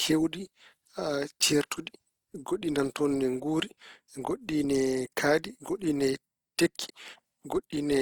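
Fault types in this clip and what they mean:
Opus compression: The speech has likely passed through an Opus encoder in its music mode at a low rate, fitting about 24 kbps. Short of bits, it fills bands with folded or noise content, so the speech sounds plainly grainy and rough, though bandwidth still reaches 20.3 kHz.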